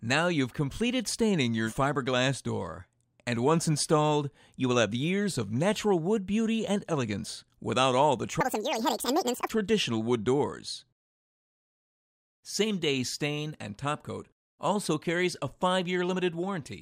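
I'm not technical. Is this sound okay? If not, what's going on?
No. From 8.41 to 9.50 s there's a section at the wrong speed: that stretch plays almost twice as fast (1.92 times) and jumps up in pitch by nearly an octave, so it sounds squeaky and rushed. It's likely playback or editing running on the wrong clock.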